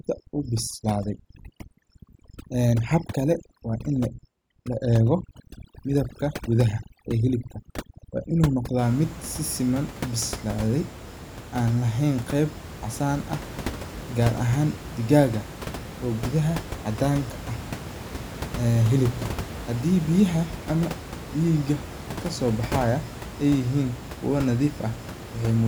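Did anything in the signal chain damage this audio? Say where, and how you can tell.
Yes. Overdone noise removal in the call processing stage damages the speech from 0.0 to 8.79 s. The background drops and breaks up into twinkling specks. The suppressor cuts bands near its noise estimate too hard, taking quiet speech detail too. After that, room noise sits about 12 dB below the speech.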